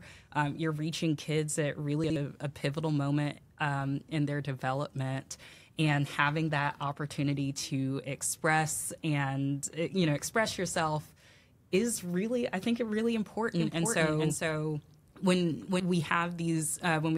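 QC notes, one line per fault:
2.04–2.16 s, chunks out of order: just after "you're reaching kids at", a brief jumbled stutter before "a pivotal moment um". Two 60 ms chunks have swapped places, so one plays a chunk late and the join points land mid-waveform. That produces three hard joins within about 0.12 s. Unlike a dropout, no audio is missing. Every piece is present, just in the wrong order, so the moment sounds garbled rather than gapped.
13.6–15.8 s, doubled audio track: starting after "really I think really", a second full-band copy of the same speech runs about half a second behind the original at about 5 dB lower, then stops abruptly at 15.8 s. Two out-of-step copies were likely mixed together, perhaps a second capture through a slower path. What separates this from echo or reverb is that the trailing copy has no decay tail and no room colouring, and it switches on and off cleanly.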